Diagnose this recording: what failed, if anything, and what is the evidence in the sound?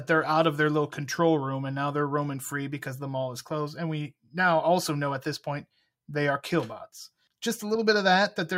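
Nothing failed in this speech recording, and no stage of the chain leaves an audible mark. There is no event at any point to place in time or trace to a mechanism.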